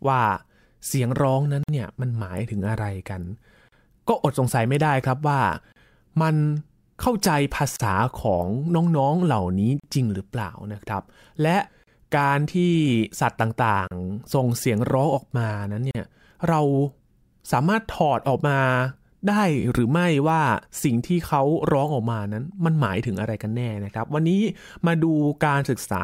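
Separately encoded pieces of this speech were joined without trimming the encoder's start-up delay and end-of-piece padding, leaving a gap at a join of encoded pieces about every 2 seconds. The first, at 1.63 s, lasts 51 ms. The rest, at 3.69, 5.72, 7.76, 9.80, 11.84, 13.87 and 15.91 s, last 38 ms each. Each gap is a short dropout with smeared edges in the flow, after which the speech resumes where it stopped.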